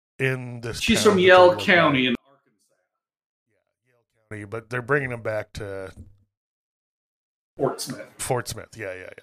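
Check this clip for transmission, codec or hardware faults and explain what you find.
One fault stands out. From 2.15 to 4.31 s the speech drops by about 39 dB and becomes almost inaudible. The likely cause is one channel inverted: with one stereo side's polarity reversed, the shared centred speech cancels when the channels are summed to mono, leaving only a faint trace.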